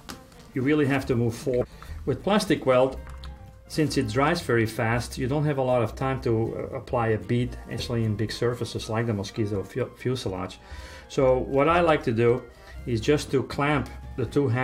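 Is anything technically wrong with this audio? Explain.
Yes. Compressed frames skipped at 1.60 to 1.62 s and at 7.78 s: whole compressed frames, around seven each time, were missing or rejected by the decoder, so the sound jumps ahead by roughly 150 ms and then 200 ms, with an abrupt join at each point.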